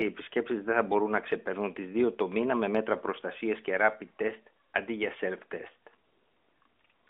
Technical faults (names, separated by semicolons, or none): none